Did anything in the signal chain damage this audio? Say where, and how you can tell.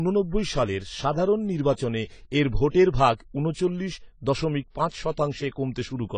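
Yes, at the codec stage, across the whole speech clip. Nothing survives above 9.7 kHz, so the sound is dull. Sibilants turn fizzy and smeared. This is likely AAC compression, with AAC-LC starving its frequency lines, which fits roughly 24 kbps.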